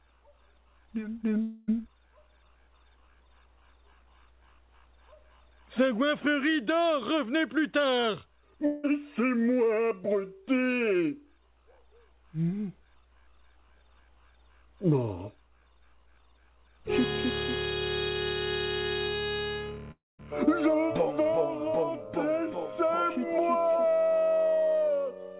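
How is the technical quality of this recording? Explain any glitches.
There are three audible gaps, all riding on a narrowband call sound with nothing above 4 kHz, which fits a G.711-style phone path. The dropouts come at 1.42–1.70 s, 8.66–8.85 s and 19.91–20.20 s, and they're most likely a long network dropout each time. Packets stopped arriving for roughly 0.18 to 0.28 s, so the receiver stretched the last sound into a fading buzz. The third one decays into about 0.21 s of silence before the audio resumes, with the lost chunk simply gone.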